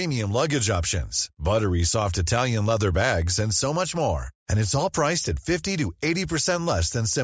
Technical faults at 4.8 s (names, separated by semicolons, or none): none